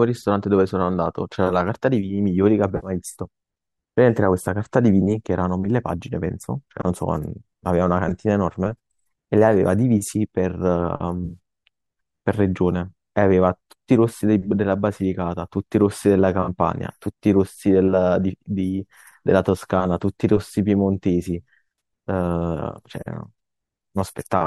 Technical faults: AAC frame loss with concealment

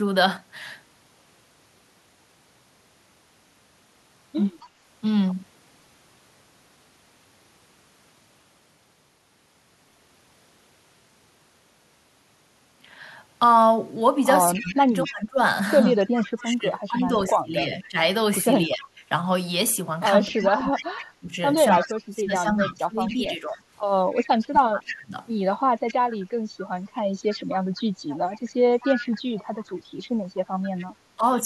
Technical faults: echo leak; speech suppressed in double talk

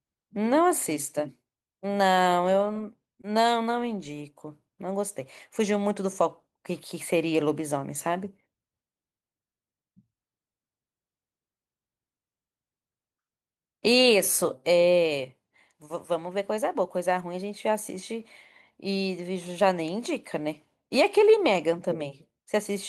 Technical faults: none

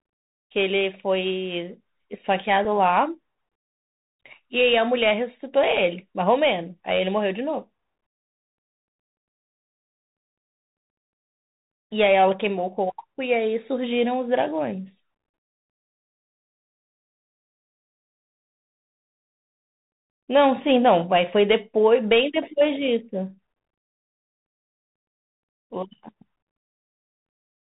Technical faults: Bluetooth CVSD headset codec; Bluetooth headset packet repeated

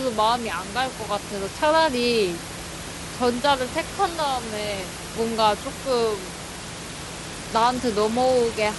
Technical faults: Bluetooth SBC bit pool drop

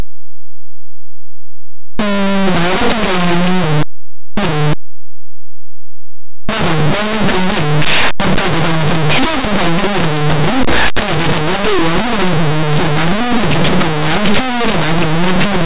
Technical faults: linear audio read as companded

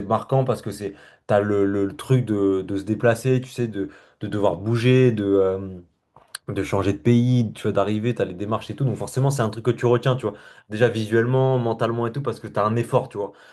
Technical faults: none

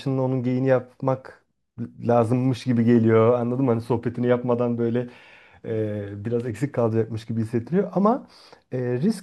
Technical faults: none

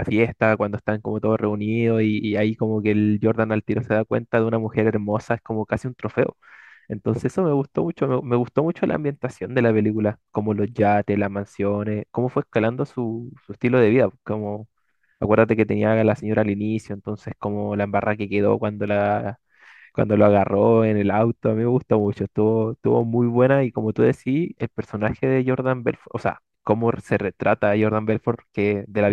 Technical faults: clock slip clicks

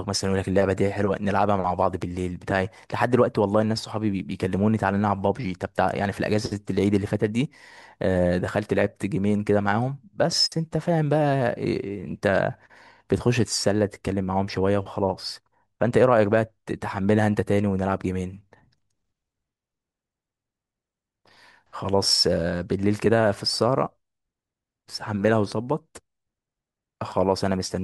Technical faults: loud pop

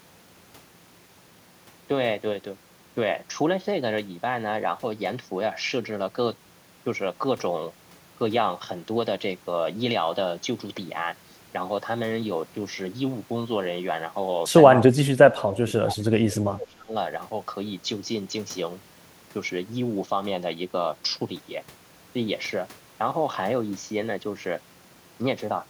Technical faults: speech suppressed in double talk

